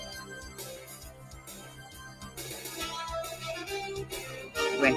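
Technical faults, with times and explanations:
Throughout: noise suppressor applied to music or sounds. A suppressor tuned for speech keeps mistaking steady, sustained parts for noise, so the level swings by around 10 dB and sounds pumping and thinned. Unlike a compressor, it reacts to how steady a sound is rather than how loud.
1.1 to 2.37 s: sound cut by the noise suppressor. For around a second within this span, the suppressor treats the sound as noise and pulls it down by as much as about 7 dB. Held or fading parts sink while sharp onsets pass, so it dips rather than fully dropping out.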